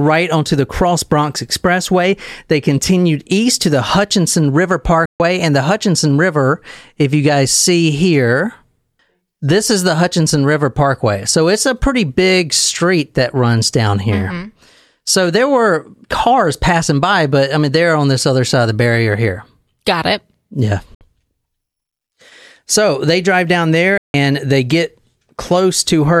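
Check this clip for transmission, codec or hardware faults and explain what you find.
The speech has three short silent gaps, at 5.05 to 5.20 s, 20.95 to 21.01 s, and 23.98 to 24.14 s, lasting about 142, 61 and 162 ms. These are likely a Bluetooth dropout: packets arrive too late to play, so the output stops and the speech resumes further on, as though it had kept going. The waveform shows flat holes, and the spectrogram shows full-height blank columns.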